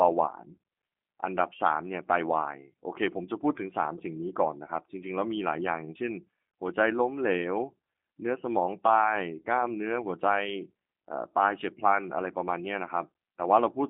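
Throughout, the speech has been squeezed through a G.729 codec, which fits the 8 kbit/s G.729A variant: each 10 ms frame is rebuilt from a vocal-tract filter, pitch predictor and sparse pulses. The result sounds plainly rough and synthetic, confined to about 200 Hz–3.4 kHz, with nothing above 3.5 kHz.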